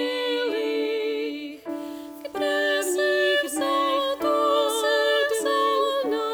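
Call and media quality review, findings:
Low bit depth without dither, 1.69 s to end. Grainy distortion that follows the sound. Quiet passages turn gritty, and the faintest parts sputter between steps or drop to silence. Likely cause is requantisation by plain rounding with no dither, consistent with roughly 7 bits, leaving error only about 35 dB below signal. Waveform: staircase steps on low-level sections, flat runs near silence. Spectrogram: broadband hash rising and falling with the signal, vanishing in gaps instead of forming a steady floor.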